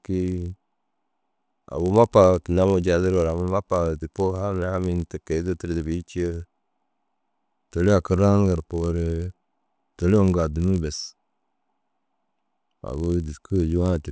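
A steady 50 Hz buzz rides under the speech from start to finish, present only while there is signal. The resampler restarted on every block, converting 48 kHz to 16 kHz in 20 ms pieces, so each block edge leaves a small error that repeats fifty times a second.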